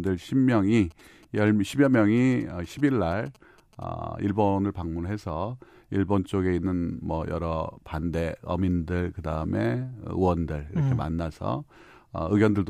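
From about 0.76 s to 3.84 s there's a stretch of GSM signalling bursts: a galloping dit-dit-dit of short buzzes sitting around 30 dB under the speech. That pattern points to a 2G phone nearby handling signalling traffic rather than a live call, sending its radio bursts in short groups. The audio circuit rectifies that RF, and the buzz repeats at about 217 Hz, matching the GSM frame rate.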